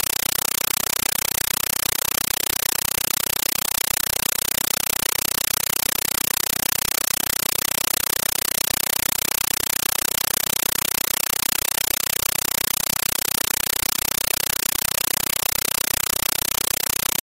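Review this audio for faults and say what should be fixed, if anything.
Compressed stream played as audio throughout: undecoded AC-3 bitstream, bursts of 8 ms repeating at 31.25 Hz, heard as loud chattering static replacing the speech, density suggesting roughly 384 kbps. Set the receiver to decode Dolby Digital, or send PCM from the source.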